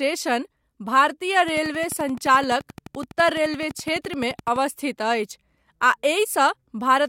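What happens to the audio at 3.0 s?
A train of clicks runs from 1.48 to 4.57 s, regular at 11.7 per second and likely from electrical interference, ticking above the speech. It shows as evenly spaced vertical spectrogram lines and waveform spikes.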